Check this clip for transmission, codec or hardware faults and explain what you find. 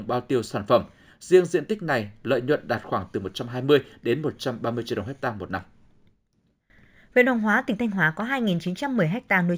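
One fault runs throughout: imaging from linear upsampling. Straight-line interpolation, likely from 16 kHz audio, leaves faint mirrored energy between 8 and 16 kHz, putting a light metallic shimmer on sibilants.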